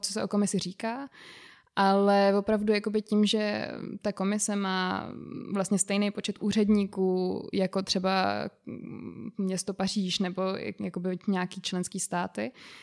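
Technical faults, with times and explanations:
No technical faults are audible in this speech recording.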